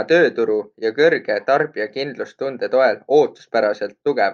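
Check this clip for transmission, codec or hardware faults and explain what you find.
Nothing stood out on listening to this speech clip.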